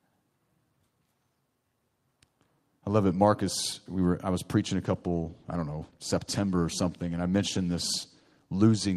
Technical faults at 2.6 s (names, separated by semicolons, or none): none